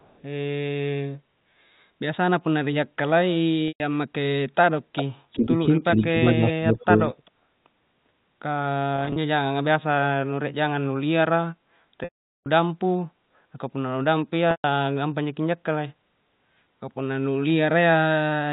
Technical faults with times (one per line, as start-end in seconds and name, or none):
0.00-0.23 echo leak
3.68-3.80 packet loss with pitch repetition
4.96-5.04 echo leak
5.33-5.47 echo leak
5.38-5.57 speech suppressed in double talk
5.95-7.00 speech suppressed in double talk
6.27-6.32 echo leak
7.25-7.31 echo leak
8.96-9.16 packet loss with pitch repetition
12.04-12.46 packet loss with pitch repetition
14.51-14.64 packet loss with pitch repetition